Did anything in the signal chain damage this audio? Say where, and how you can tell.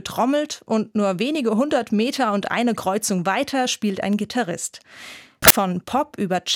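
Yes. Samples built from the wrong bytes, from 5.42 to 5.50 s, a burst of about 80 ms near the end of the speech. The damage sits at the sample-format conversion stage, where the reader assembled each sample from misplaced or swapped bytes. That pushes the rapidly fluctuating low-order bits into the most significant position, so for that stretch the speech is replaced by loud, harsh broadband noise, close to white on the louder sounds.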